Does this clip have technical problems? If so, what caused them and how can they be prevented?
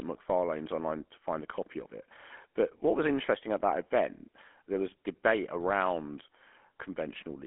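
Yes. GSM full-rate codec damage runs through the whole speech clip. The sound is band-limited to roughly a phone line's 250 Hz to 3.4 kHz, with nothing above 3.8 kHz, and carries a plainly audible buzzy, gravelly roughness. This fits the 13 kbps GSM full-rate coder, which models the vocal tract as a filter and excites it with a sparse, regularly spaced pulse train. That coarse excitation is what turns the speech rough and buzzy. To prevent it, record or route the audio over a wideband path rather than a GSM call leg.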